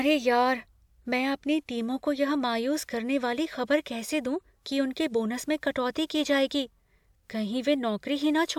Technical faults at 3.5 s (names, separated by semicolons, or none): none